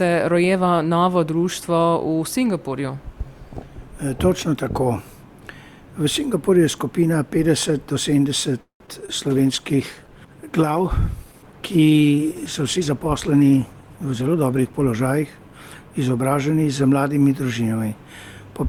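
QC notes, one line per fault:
8.61 to 8.82 s, call audio freeze: the sound stops moving forward for about 0.21 s. The last moment is stretched into a fading buzz that sinks into silence for roughly 0.11 s, and then the audio carries on from where it stopped, so nothing is lost, only delayed. The likely cause is packets held up in transit, leaving the jitter buffer empty. On a spectrogram the final frame smears horizontally, then goes blank before the content resumes.
8.86 s and 9.06 s, short concealed packet loss: two brief smears, each covering about 20 ms that never reached the decoder. The receiver bridged each hole by extending the preceding sound, then crossfaded back into the real signal, which is heard as a quick wobble. On a waveform the envelope goes slightly too smooth or repetitive for a couple of hundredths of a second, and the spectrogram shows a short stretch of copied harmonics or blurred noise.
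9.15 to 16.37 s, call bitrate drop: the encoder falls from 64 to 16 kbps and stays at the lowest rate for about 5.8 s. The sound turns muffled and watery as Opus codes coarsely and discards the top of the spectrum. On a spectrogram the upper frequencies are cut off along a hard horizontal ceiling, and what remains looks blocky and patchy, until the full bandwidth returns near 16.4 s.
12.78 to 14.44 s, jitter buffer speed-up: the audio runs about 11% fast at unchanged pitch, sounding hurried, as the receiver trims roughly 0.2 s of excess buffered delay. It does this by cutting out short pitch-period-length slices over and over. On a spectrogram the harmonics keep their spacing while events crowd closer together in time, and the waveform shows small splice points where cycles were removed.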